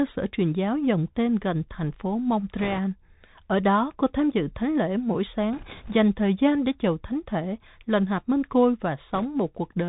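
The whole speech clip passes through a Bluetooth CVSD headset codec, a one-bit delta modulator whose adaptive step size tracks the waveform only up or down each sample, which fits a 64 kbit/s headset stream. Nothing above 4 kHz survives, so the speech is narrowband and muffled. Fast, loud high-frequency detail outruns the step, sibilants turn scratchy, and a granular hiss sits under everything, plainly audible throughout.

Bit errors on a Bluetooth voice link then corrupt the stream three times. At 2.58 to 2.78 s, right after "tên gần thành phố", roughly 3 percent of bits flip. At 5.53 to 5.96 s, between "dự thánh lễ mỗi" and "thời gian để chầu", about 2 percent flip. At 9.14 to 9.25 s, after "lần hạp minh côi", it is around 1.5 percent. Because each CVSD bit carries only a small step and errors fade quickly, there are no sharp clicks. Instead the speech gains a rushing, crackly noise, heaviest in the first burst.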